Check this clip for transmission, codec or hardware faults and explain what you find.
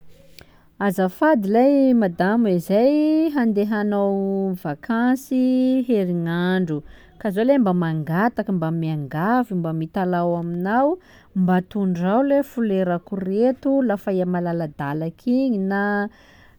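No faults found here.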